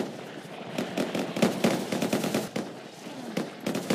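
A doubled audio track runs from 0.70 to 2.48 s: a second, full-band copy of the sound trails the original by around 200 ms at roughly equal loudness, with no decay or room colour. It cuts in and out abruptly, likely from a slower duplicate capture path.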